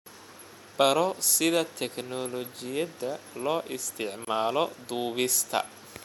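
Separately encoded pieces were joined without trimming encoder delay and padding, leaving a gap at a join: a 24 ms silence from 4.25 to 4.27 s with smeared edges.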